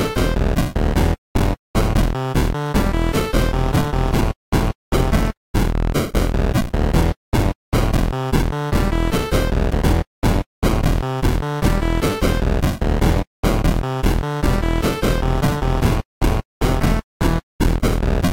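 Damaged data in a compressed stream shows up at 5.36 s and again at 17.8 s. At each point the decoder hits corrupted bytes, misreads the frame and loses sync while hunting for the next valid header, leaving a brief chirp or blip in the sound.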